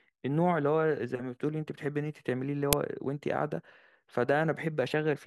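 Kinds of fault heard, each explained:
Uninitialised buffer: at 2.73 s the speech is broken by a single, loud crack of digital noise about 2.7 ms long, which fits a 128-sample block being played before any audio was written to it, so stale memory came out as samples. On the waveform it is a narrow spike standing well clear of the speech; on a spectrogram it is a thin vertical stripe spreading energy across the whole frequency range.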